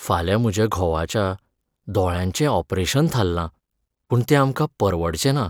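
At 4.10 s the speech jumps forward, a case of compressed frames skipped. About ten frames of 21.3 ms each were never played, so roughly a fifth of a second of audio is missing.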